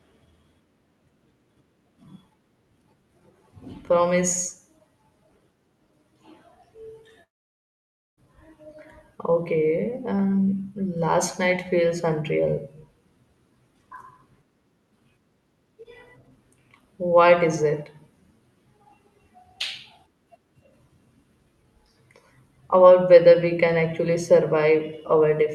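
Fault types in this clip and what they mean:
Long network dropout: At about 7.23 s the speech breaks off. The last sound is drawn out into a buzzy, hissing tail that fades quickly, and near-silence follows until the speech resumes at about 8.19 s. Close to a second of speech never returns; it is skipped, not delayed. The likely cause is a gap in packet arrival, with the receiver's concealment briefly extending the final sound before giving up and leaving silence.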